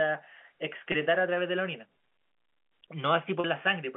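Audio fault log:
0.92–0.94 s and 3.40–3.44 s, packet loss with pitch repetition: two short dropouts, 20 ms and 40 ms long, the first consistent with one lost 20 ms packet and the second with two. At each gap the receiver replays the last pitch cycle to fill the hole, so the sound briefly holds steady with a faint buzzy sameness before normal audio resumes through the narrowband telephone channel.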